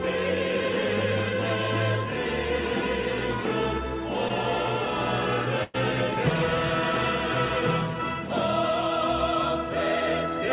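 At 4.28 to 4.32 s there is a short concealed packet loss. About 20 ms of audio never reached the decoder in time, and the receiver bridged the hole by extending the preceding sound before blending back into the real signal. It is heard as a tiny smear or wobble. On a spectrogram the harmonics or noise texture briefly freeze into a smooth, repeated patch, and the waveform shows a short stretch of copied cycles at the join rather than any dropout.

From 5.64 to 5.76 s a burst of packet loss takes out about 100 ms in a row. The receiver fills roughly 0.1 s by continuing the last sound and steadily turning it down, so it comes across as a held buzz or fading hiss. The audio then picks up further along, with the lost section simply absent. There is no silence in the gap. A spectrogram shows a flat, unchanging band that dims toward its end before the normal texture abruptly returns, and the waveform envelope tapers across the patch. 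Throughout, the spectrogram is empty above 4 kHz, which fits the G.711 A-law codec on the call path.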